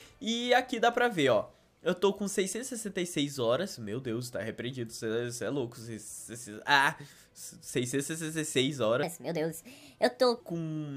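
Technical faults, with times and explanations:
9.03 to 10.40 s, wrong sample rate: For this stretch the sound suddenly runs fast and high. It plays about 1.38 times too quickly and sits about 5.5 semitones sharp. Samples captured at one rate are being read out at a higher one with no conversion. That ratio fits a 32 kHz recording played back at 44.1 kHz. Speed and pitch rise together by the same factor, giving the hurried, chipmunk-like lift.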